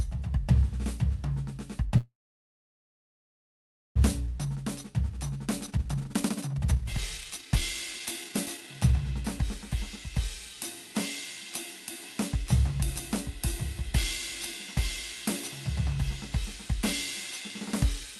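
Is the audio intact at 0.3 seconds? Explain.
Yes, the music is intact at 0.3 seconds, with no fault at that moment.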